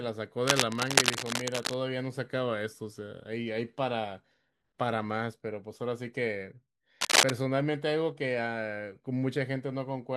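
From 0.47 to 1.74 s, and again from 7.01 to 7.31 s, cable scratch noise rasps over the speech, first about as loud as the voice, then well above it. Likely a worn lead or connector being moved, its contact flickering. The dense, uneven rustle sets it apart from isolated clicks or steady hiss.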